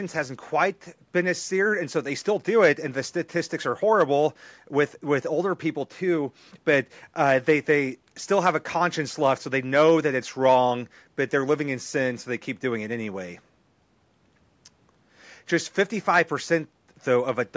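Speech with no technical faults to report.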